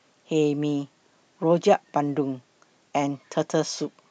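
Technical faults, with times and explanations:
No technical faults can be heard anywhere in this speech recording. There is nothing to time or explain.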